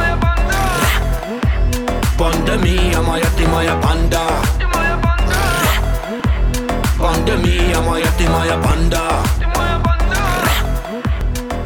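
A short click-like stutter recurs at 1.19, 3.69, 6.2, 8.71 and 11.21 s, exactly 2.5 s apart, which marks overlapping chunks: the audio was handled in 2.5 s blocks, each starting about 6.5 ms before the previous one ended, so that sliver plays twice at every join. Unlike a dropout or lost packet, nothing goes missing; a tiny piece repeats, and the strictly even spacing points to block processing rather than random network loss.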